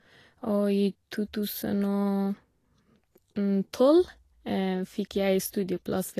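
Throughout, the speech has nothing above 14.2 kHz. This is likely low-bitrate audio saved at a high bitrate: a high-bitrate MP3 keeping an earlier encoding's losses.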